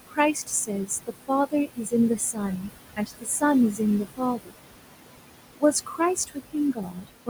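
Across the whole recording the background pumps down in the pauses and swells back under the speech, with the room noise sitting only about 10 dB below the speech. These are noise suppressor artifacts: the suppressor pulls down bands it judges to be steady noise by about 20 dB, frame by frame.

From 0.07 to 3.81 s, 4.17 to 4.55 s and 5.56 to 7.29 s, soft consonants and word tails sound swallowed, adding up to about a second, a fifth of a second and under a second. This is speech cut by the noise suppressor, which mistook those quiet parts for noise and dropped them by about 20 to 22 dB.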